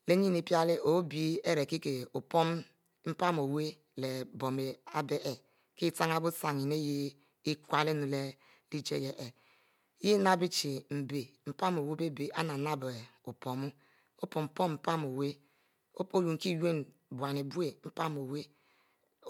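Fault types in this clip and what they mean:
Nothing stood out on listening to the speech, and no fault of any kind could be heard.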